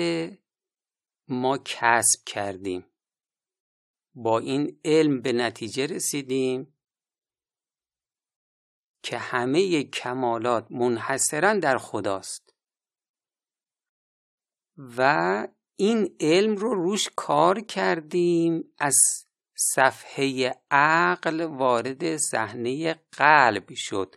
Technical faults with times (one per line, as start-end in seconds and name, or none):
none